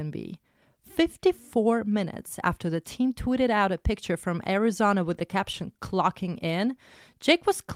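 Scattered short gaps appear between 5.19 and 5.81 s in this speech: a handful of tiny packet losses, each under about 10 ms, patched by extending the preceding sound. Only a small fraction of the stretch is concealed, heard as brief ticks and slight smears.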